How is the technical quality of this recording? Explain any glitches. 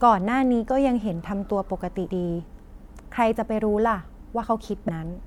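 There is one glitch near the end of the speech. At 4.87 s the audio jumps forward abruptly, with a brief smeared blip rather than a hard click. This is compressed frames skipped: roughly a fifth of a second of audio never played, consistent with around seven 26.1 ms frames going missing or being rejected by the decoder. The overlap between neighbouring frames softens the join.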